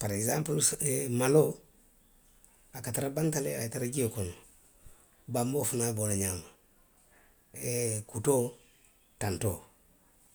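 Listening through the speech, nothing stood out as a technical fault at any point.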